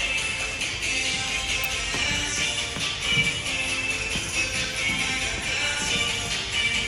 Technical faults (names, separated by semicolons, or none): electrical switching spike